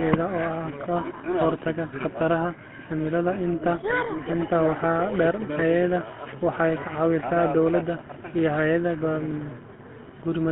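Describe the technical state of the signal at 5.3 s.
At 5.3 s the speech carries GSM full-rate codec damage, present across the whole clip. The codec models the vocal tract and drives it with a sparse pulse excitation, consistent with 13 kbps, producing plainly audible buzzy, gravelly roughness. A spectrogram shows energy confined to roughly 150 Hz to 3.4 kHz, with a hard ceiling.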